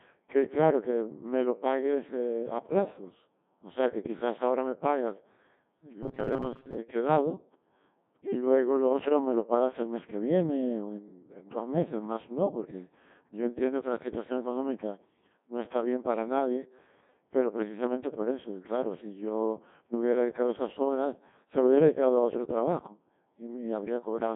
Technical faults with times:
0.00-24.35 Codec 2 vocoder
6.03-6.78 robotic sound from repeated short buffers

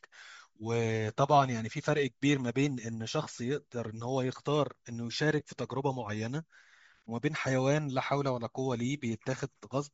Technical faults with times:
0.00-9.93 Bluetooth LC3 compression

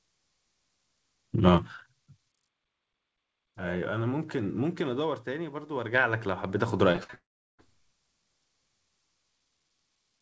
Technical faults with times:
6.92-7.15 repeated packet loss (robotic sound)
7.15-7.60 long network dropout

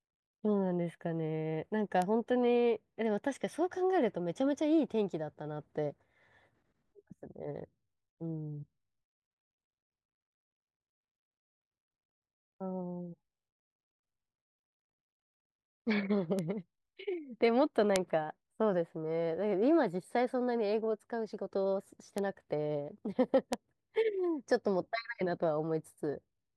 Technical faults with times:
2.02 bit error spike
16.39 bit error spike
17.96 bit error spike
22.18 bit error spike
23.53 bit error spike

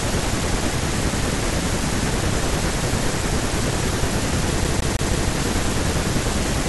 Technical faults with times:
4.64-5.29 CD stuck on one turn

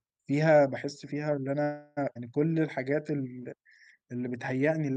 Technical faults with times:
1.63-1.99 call audio freeze
2.15-2.17 skip ahead
2.48-4.29 jitter buffer slow-down

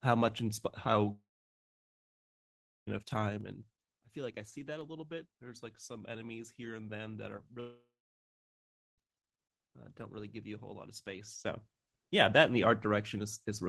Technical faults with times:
1.11-2.89 long network dropout
3.24-3.71 zipper noise
7.37-7.58 short concealed packet loss
7.60-9.00 long network dropout
10.85-11.87 zipper noise

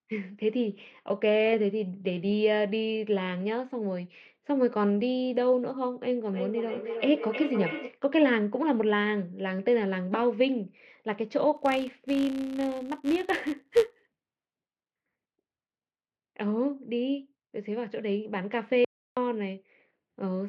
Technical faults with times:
6.28-8.01 feedback echo between two devices
11.57-14.62 filter restarted on every block
18.85-19.17 audio dropout to silence

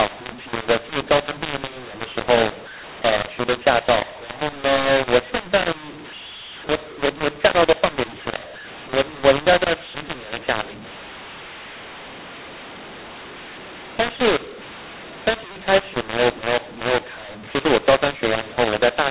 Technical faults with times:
0.00-19.10 mu-law and A-law mixed up

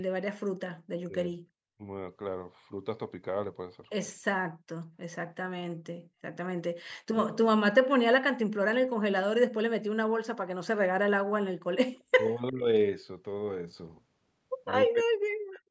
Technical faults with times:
1.07-1.36 speech suppressed in double talk
6.70-7.32 speech suppressed in double talk
11.95-12.04 echo leak
12.13-12.70 speech suppressed in double talk
14.92-15.71 speech suppressed in double talk

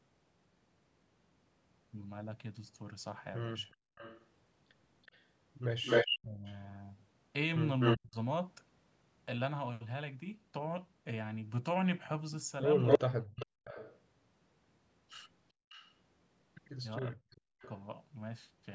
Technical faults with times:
3.70-7.97 echo leak
3.77-3.95 background gated by the echo canceller
6.20-8.16 speech suppressed in double talk
12.87-17.69 echo leak
13.00-13.68 speech suppressed in double talk
15.53-15.70 background gated by the echo canceller
16.99-17.63 speech suppressed in double talk

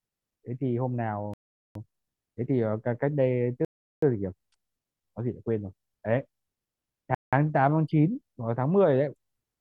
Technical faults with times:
1.34-1.75 Bluetooth stall
3.65-4.02 Bluetooth stall
7.15-7.33 Bluetooth stall

